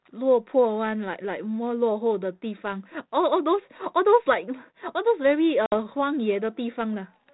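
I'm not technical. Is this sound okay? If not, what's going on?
No. At 5.66 to 5.75 s the speech cuts to silence, then comes back briefly rough. This is packet loss on an ADPCM call, which momentarily confuses the decoder.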